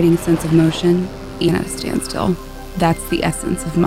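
At 1.47 s there is a brief burst of damaged data in a compressed stream, lasting only about 16 ms. A stretch of the encoded bytes arrived corrupted, so the decoder misread the frame there and lost its place until it found the next valid frame header. It sounds like a short chirp, squawk, click or hole cutting across the audio. On a spectrogram it shows as a thin vertical disturbance, and the waveform has a narrow discontinuity at that point.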